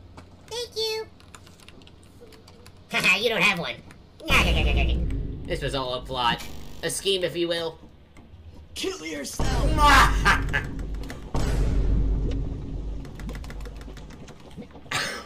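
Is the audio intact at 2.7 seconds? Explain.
No. At 2.7 seconds the audio sits inside a section at the wrong speed, running from the start to 5.04 s. The likely cause is that this stretch was played back against the wrong clock, so it runs 1.23 times faster than recorded. Because speed and pitch move together, everything here sounds hurried and raised by roughly four semitones, then drops back to its true pitch and pace once the section ends.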